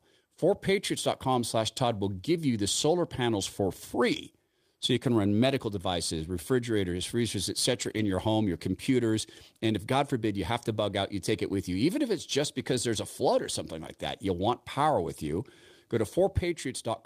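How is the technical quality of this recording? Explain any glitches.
The speech has one glitch. From 7.73 to 8.11 s, a lost packet was rebuilt from error correction. Lost packets were replaced by the low-bitrate copies each following packet carried, so the sound continues without a gap but turns rougher and noisier. The span fits roughly ten packets. Plain concealment would instead smear or repeat the preceding sound.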